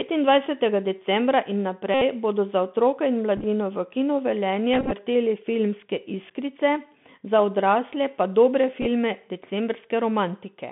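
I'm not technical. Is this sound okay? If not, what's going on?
No. There are two problems.

The whole recording has the sound of a Bluetooth CVSD headset codec. This is the basic way a wireless headset squeezes speech to send it to a phone. The speech sounds thin and muffled, like an old phone line, because the high and low ends are cut away. S sounds come out scratchy. Loud sharp sounds turn rough, and a grainy hiss sits underneath everything.

The second problem is Bluetooth headset packet repeated. Small pieces of the signal got lost on the way from headset to phone. The headset filled each gap by replaying the piece before it. At 1.94 to 2.01 s, right after "decembra in", the gap is unbroken, so you hear a short steady buzz. The others are patchy and sound like quick ticks and brief rough bursts: at 3.37 to 3.45 s after "za otroke in", at 4.74 to 4.93 s, the longest stretch, and at 8.82 to 8.86 s after "pa dobre".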